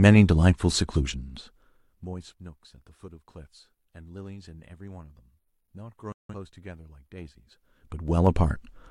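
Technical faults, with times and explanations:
6.12 to 6.35 s, digital broadcast dropout: the speech cuts to silence for about 0.17 s. That fits a few corrupted frames muted by the receiver.
7.15 to 8.36 s, zipper noise: the level shifts roughly 25 dB in unsmoothed 2 dB steps, about ten a second. Each step clicks, making a zipping tick.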